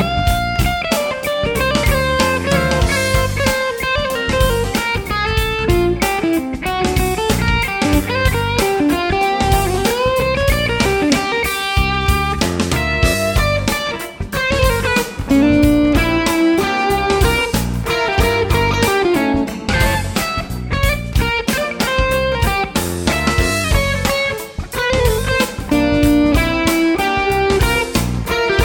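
The sound abruptly slows about 6% and sags roughly a semitone (107 cents) at 14.87–15.43 s, 19.16–20.89 s and 23.64–25.18 s, then snaps back each time, likely a drift correction step between mismatched clocks.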